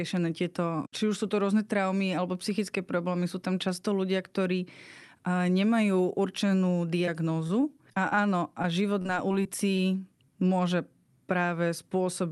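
Just after "ľudia ktorí nemajú určenú", from 7.05 to 7.09 s, there is a short concealed packet loss. A few tens of milliseconds of the call arrived too late, and the decoder bridged the hole by extending the preceding sound before blending back in. It sounds like a brief smear. On a spectrogram, the harmonics run flat and slightly blurred for that instant. The waveform shows a smooth, repetitive patch instead of natural variation.

From 7.47 to 8.66 s, and again from 9.02 to 9.81 s, repeated packet loss gives a choppy, robotic quality. Holes of up to about 28 ms recur through each stretch, each one patched by continuing the last sound. On a spectrogram, short frozen or smeared slices appear at intervals. The waveform shows repeated cycles and small discontinuities.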